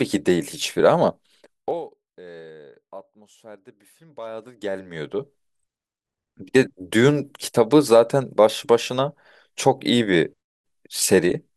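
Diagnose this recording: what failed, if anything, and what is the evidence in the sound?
Zipper noise from an unsmoothed gain stage, at the driver or buffer level: between 1.52 and 1.88 s the speech level drops by roughly 25 dB in 1 dB steps at around fifty a second, and each step adds a faint tick, so a zipping rides on the speech as it fades. The gain is updated once per buffer, about every 20 ms, with no ramp between values. On a waveform the envelope descends as a staircase. A spectrogram shows thin vertical broadband lines at each step.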